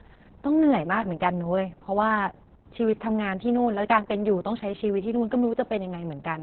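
From start to finish the speech sounds muffled, hoarse and slightly robotic, with nothing above about 4.2 kHz, so consonants lose their crispness. That points to heavy Opus voice compression: the SILK linear-prediction coder working in narrowband mode, coding the excitation so coarsely that the voice turns buzzy and synthetic. The damage level fits a bitrate around 6 kbps, with the coarse time resolution suggesting 60 ms frames.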